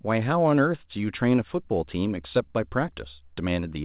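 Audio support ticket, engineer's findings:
Nothing to flag here; the speech has the usual narrowband call-path character with nothing above 4 kHz, which fits a G.711 mu-law leg at 64 kbps, and nothing in it calls for follow-up.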